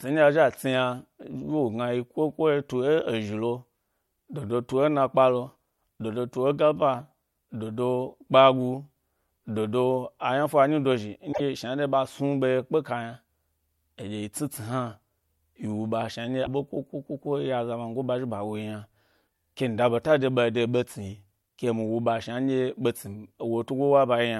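A broken MP3 bit reservoir is the likely cause of two brief glitches in this speech, at 11.32 to 11.41 s, just before "shnanɗye ɓa", and at 16.45 to 16.48 s. Each time the audio jumps ahead. After frames went missing, the next frame looked back for borrowed data and decoded bytes from the wrong frame, which fits a 24 ms frame length.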